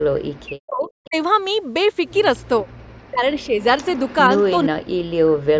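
From 0.08 to 1.15 s the speech dips by as much as about 40 dB, likely speech suppressed in double talk. The echo canceller, unable to separate the talker from loudspeaker echo, turns everything down. Shorter, shallower dips of this kind follow at 2.63 to 2.68 s (about 15 dB) and at 3.09 to 3.59 s (about 30 dB), and a deep one returns from 4.68 s to the end. On a waveform these appear as sudden collapses in amplitude.

Alongside these dips comes a likely echo leak, a faint delayed copy of the voice arriving 471 to 482 ms late, roughly 20 to 25 dB below the speech. It can be heard at 0.84 to 1.08 s, at 3.39 to 4.44 s, and briefly at 5.54 to 5.59 s. On a spectrogram it shows as a faint smeared copy of the earlier harmonic patterns, offset by about half a second. The call microphone processing leaves nothing above 8 kHz.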